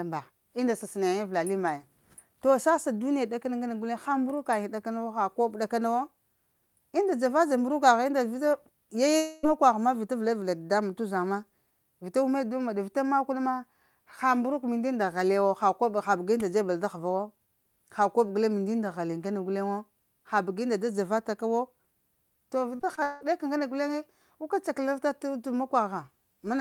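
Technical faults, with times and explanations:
9.17–9.45 s, long network dropout: The speech breaks off for about a quarter second just before "ma vita". The receiver stretches the last sound into a fill across the whole gap, with no true silence. The likely cause is audio that never arrived.
22.75–23.23 s, repeated packet loss (robotic sound): Four short holes arrive in quick succession just before "ka ŋgana guleŋe guka", the longest about 0.18 s. Each is patched by repeating the last sound, so roughly half this stretch is filler. The speech turns choppy.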